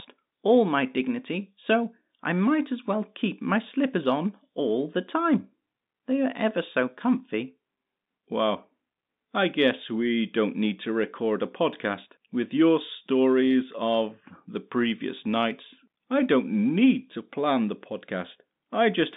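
No faults are present in the speech; its narrow band of about 150 Hz to 3.7 kHz is consistent with G.711 telephone coding working as intended.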